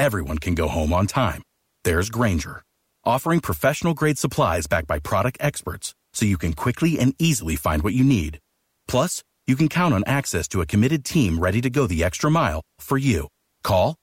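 No technical faults can be heard anywhere in the speech, with the signal holding steady throughout.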